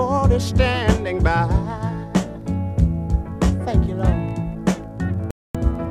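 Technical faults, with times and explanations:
5.31 to 5.55 s, digital broadcast dropout: the sound mutes for about 240 ms and then picks up again further along, with nothing carried over from the gap. The receiver lost lock or got corrupted frames and went silent until clean data returned, which fits roughly ten frames going missing.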